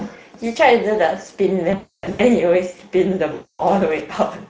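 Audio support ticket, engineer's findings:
Speex codec, whole clip. Noisy, hoarse texture on the speech; codec damage plainly audible. The CELP coder is short of bits for the excitation, which fits a mid-quality Speex mode near 16.8 kbps. Upper band thin and hissy, consistent with noise-like fill rather than real detail.

VoIP packet loss concealed by the speech codec, 1.71 to 2.21 s. About 400 ms of audio missing across roughly 480 ms, longest gap 280 ms. The decoder extends the last pitch and filter with falling gain, so the sound smears into a fading buzz.

Same fault, 3.33 to 3.61 s. Roughly 260 ms lost. Sound stretches into a decaying coloured tone. Recovery is weak and distorted for a short stretch after packets return, because each decoded frame builds on the bad state of the previous one.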